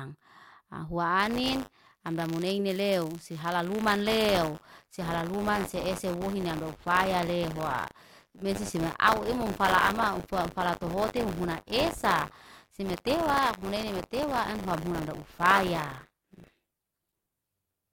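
From 1.19 s to the end, the speech carries buffer tearing. The writing program and the playback hardware have slipped, so they cross inside every period. A small slice of each buffer replays audio from roughly 40 ms earlier. The hard joins produce a robotic 100 Hz buzz.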